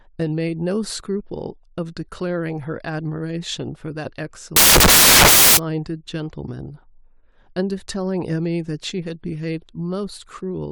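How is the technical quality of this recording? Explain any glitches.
Quality breaks down once, from 4.56 to 5.57 s, where the samples are built from the wrong bytes. The reader misassembles each sample, so the fast-changing low bits take over the value, and the speech is buried under a burst of loud, harsh broadband noise for about a second.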